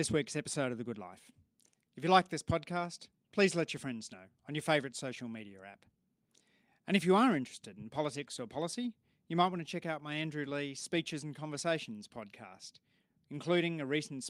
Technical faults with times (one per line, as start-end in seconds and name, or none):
none